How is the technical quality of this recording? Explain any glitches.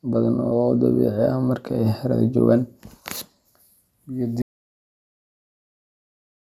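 The recording has one clear glitch: an audio dropout to silence that begins at 4.42 s and runs to the end. The speech cuts off abruptly and the final two seconds are silent, with no room tone. This likely happened because the input was lost while recording continued, writing silence. The waveform collapses to a flat line and the spectrogram goes completely blank.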